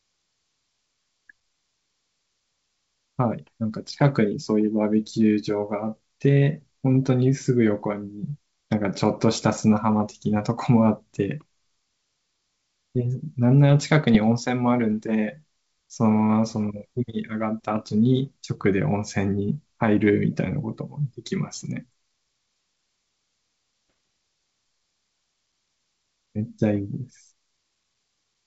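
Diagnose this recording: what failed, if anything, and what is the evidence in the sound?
Bit errors on an ADPCM link hit the transmission stage of this G.722 call. Rough popping bursts occur at 14.15 to 14.17 s and 23.88 to 23.96 s. Each flipped bit upsets the decoder's step size and predictor, which rings on. The error rate is low, around one bit in a thousand.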